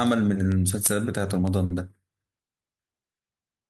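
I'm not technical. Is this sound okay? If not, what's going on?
No, there's one small glitch. At about 1.65 s, running to 1.72 s, you get a short stall from a late packet. A chunk of the speech arrived late, so the playback had nothing new to play. It stretched the last bit of sound by about 50 ms to fill the gap, then carried on from the same spot. Nothing is lost, but that moment sounds briefly held or smeared, with a slight buzz or dip, and everything after it runs slightly later.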